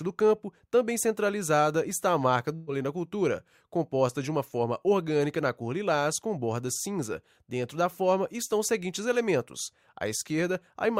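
A burst of packet loss hits at 2.55 to 2.69 s: roughly 120 ms of audio never arrived in time, so the receiver stretched the last sound across about 116 ms, fading it out, then resumed further along with that stretch of audio skipped.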